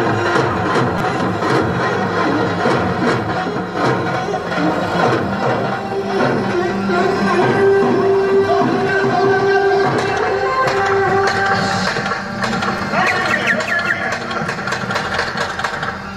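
At 0.98 to 1.00 s and at 12.78 s, a repeated buffer replays a 5 ms piece four, then two extra times. The result is a brief buzzing click, not a dropout's silent gap.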